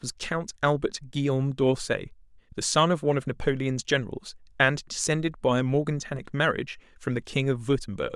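Speech, with no audible technical faults anywhere in the recording.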